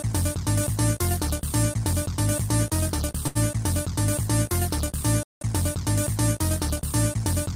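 At 3.27 to 3.37 s, a short stall from a late packet stretches the last sound for 78 ms with a faint buzz or dip. Nothing is lost, and the delay grows by 78 ms. At 5.23 to 5.41 s, a playback stall cuts the output to silence for 179 ms rather than holding a sound, likely because the player ran out of data.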